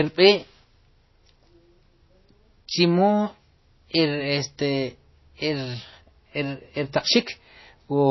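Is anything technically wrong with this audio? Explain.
Yes, there's plainly audible MP3 compression damage from start to finish. The speech has nothing above 5.8 kHz, so it sounds dull and muffled, with a watery, swirly edge as weak frequency lines flicker on and off between frames. That likely points to a starved MP3 encoding, around 24 kbps.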